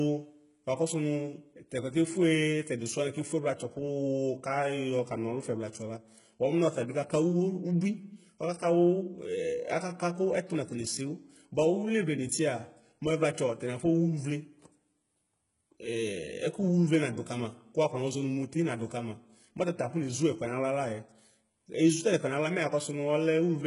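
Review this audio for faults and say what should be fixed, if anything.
Heavy codec damage runs throughout, likely from HE-AAC compression at a very low bitrate, which fits around 12 kbps. Nothing exists above 11 kHz, and the upper band is rebuilt from copied lower bands, so its harmonics misalign and sibilants sound gritty and metallic. Preventing this means encoding at a higher bitrate or with a full-band codec such as standard AAC or Opus at speech-appropriate rates.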